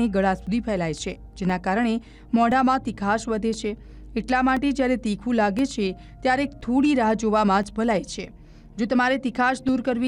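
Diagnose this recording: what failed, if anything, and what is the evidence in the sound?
Brief, evenly spaced ticks recur every 1.024 s from 0.47 s to 9.69 s, each a silent gap of a couple of milliseconds. These are periodic USB or driver dropouts: a timed background task stalls the driver or bus, dropping audio each time.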